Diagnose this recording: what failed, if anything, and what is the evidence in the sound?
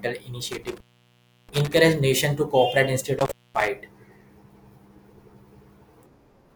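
A loose connection in the analogue wiring, an intermittent contact, opens twice in this speech recording. Between 0.52 and 1.77 s the line drops out for about 685 ms, with crackle at the make and break, just before "nation to cooperate". A second, shorter opening of about 233 ms falls between 3.19 and 3.68 s. Each time the conductor parts, the signal collapses to a faint hiss until the contact closes again.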